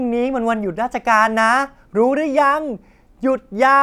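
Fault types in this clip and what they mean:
No fault types can be heard in this clip.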